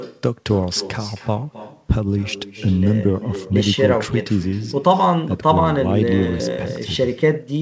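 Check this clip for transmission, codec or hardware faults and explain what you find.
There's one clear fault: echo with no canceller, present throughout. The far end's speaker feeds its mic, so the speech returns roughly a third of a second later, about 15 dB down and thin. The band-limited sound, with nothing above 8 kHz, fits a wideband call codec like G.722.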